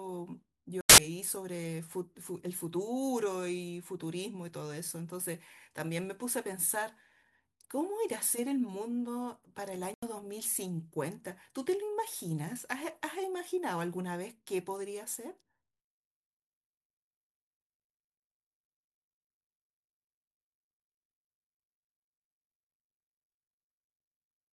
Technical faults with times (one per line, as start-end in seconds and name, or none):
0.81-0.98 corrupt frame muted
6.18 corrupt FLAC frame
9.74-10.24 corrupt frame muted